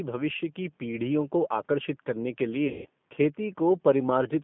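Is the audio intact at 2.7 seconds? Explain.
No. From 2.68 to 2.89 s the speech smears into a stretched, buzzy tone or coloured noise that fades and stays weak and distorted just afterwards. This is VoIP packet loss concealed by the speech codec: about 170 ms of audio went missing, and the decoder kept repeating its last pitch and filter at falling gain until packets resumed.

The G.729 codec also affects this moment. The speech sounds slightly rough and synthetic within a narrow line band of roughly 150 Hz to 3.5 kHz, which points to an 8 kbit/s G.729A encoding that rebuilds the voice from a filter, a pitch predictor and a few pulses per frame.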